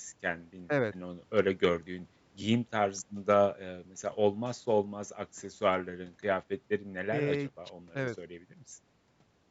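Nothing stood out on listening to this speech, which carries the ordinary trimmed bass and 8 kHz top end of call microphone processing.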